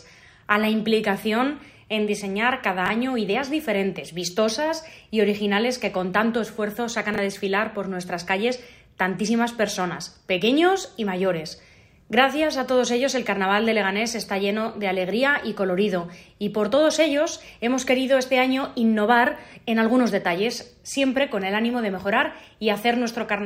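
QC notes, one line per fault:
2.86–2.90 s and 7.14–7.18 s, chunks out of order: a brief jumbled stutter. In each spot a 20 ms chunk of audio arrives one chunk late and plays after the chunk that should follow it. Nothing is lost, but the swap leaves three hard joins.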